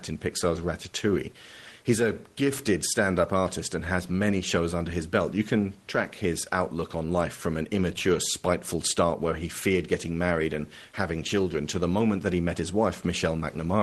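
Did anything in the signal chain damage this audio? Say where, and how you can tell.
No, nothing in the signal chain damaged this audio.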